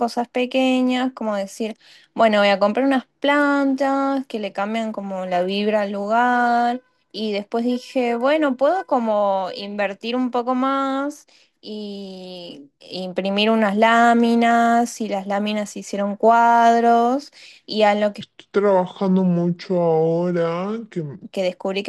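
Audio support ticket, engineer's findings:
Speech drops deep and dragged, about seven semitones low, 18.21–21.24 s (3.03 s). Section at the wrong speed: playback at 0.704x, pitch and tempo falling together; likely a resample or clock mismatch in the editor or player for that segment.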